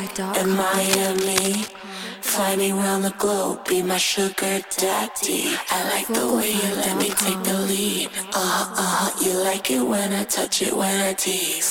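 From 0.74 to 1.74 s, a burst of scratching and rustling sits over the sound, strong, only a few decibels below it. A shorter, quieter burst returns from 7.00 to 7.26 s. Both are cable scratch noise, likely from a worn lead or connector being moved.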